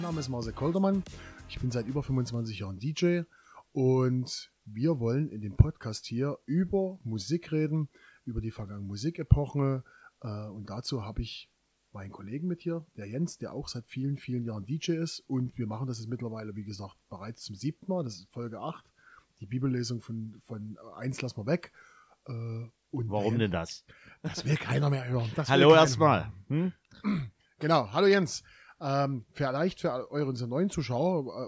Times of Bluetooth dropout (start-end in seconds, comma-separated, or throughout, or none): none